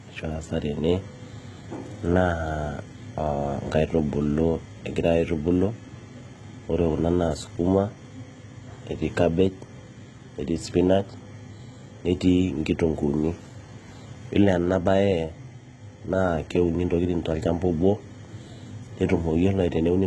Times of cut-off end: none

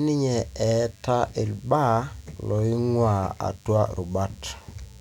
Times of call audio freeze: none

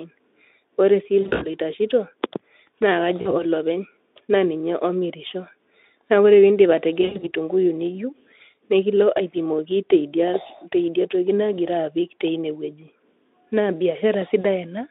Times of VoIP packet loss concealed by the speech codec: 1.21-1.48, 3.21-3.36, 7.01-7.31, 14.41-14.45

